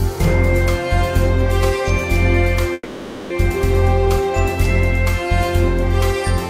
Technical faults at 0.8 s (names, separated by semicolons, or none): none